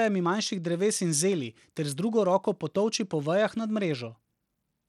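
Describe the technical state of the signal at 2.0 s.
At 2.0 s the speech carries the gritty, coarsely quantised texture of likely Bluetooth SBC compression, present across the whole clip. Starved upper sub-bands make the treble flicker rather than roll off smoothly like a low-pass filter, which fits a stream around 96 kbps.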